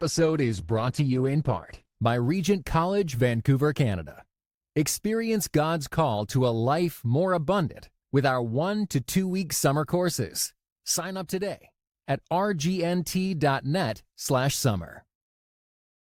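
For the first 2.0 s the player appears to be on a low-bitrate rung of an adaptive stream while it gauges the connection. The audio is band-limited, with nothing above about 12.2 kHz, and the codec smearing is heavier. At 2.0 s the quality steps up abruptly with no gap, which fits a switch from roughly 16 kbit/s Opus to 64 kbit/s Opus. The treble returns and the artefacts ease.

From 10.98 to 11.95 s, right after "two week summer courses", the level drops abruptly by about 6 dB and then recovers. The likely cause is one stereo channel dropping out: once the two channels are summed to mono, the material they share loses half its contribution. A likely channel dropout happens again, briefly, from 13.96 to 14.25 s. Its drop is again about 6 dB, and the level snaps back afterwards.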